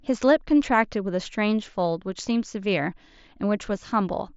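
Speech with no technical faults. The sound has come through a Bluetooth mSBC headset codec, whose wideband limit and light codec graininess on louder passages can be heard.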